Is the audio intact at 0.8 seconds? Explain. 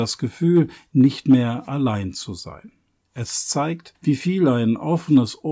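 Yes, the audio is intact at 0.8 seconds, with no dropout, click, distortion or other fault audible at that point.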